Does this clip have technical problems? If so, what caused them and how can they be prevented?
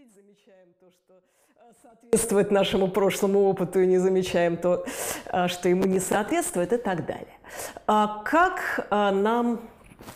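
Yes. The clip opens in an audio dropout to a faint residue. It is already under way at 0 s and lasts until 2.13 s. Only a faint leak remains, roughly 35 dB down. The signal then returns abruptly. The likely cause is a lost upstream connection while the path stayed live. Securing cables and checking the input before recording prevents it.

From 5.82 to 6.32 s there is processor overload crackle. The processor misses a run of deadlines, about fifteen of them, with buffers of roughly 10 ms. Each miss replays old audio with hard edges. The result is a gritty tearing. A larger buffer or a lighter processing load prevents it.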